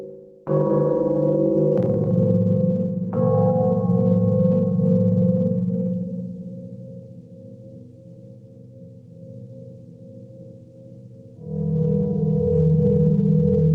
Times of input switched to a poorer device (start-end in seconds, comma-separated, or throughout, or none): none